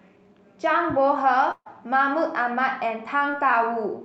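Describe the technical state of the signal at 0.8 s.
At 0.8 s the speech signal is intact, with no dropout, clipping, glitch or other audible fault at that point.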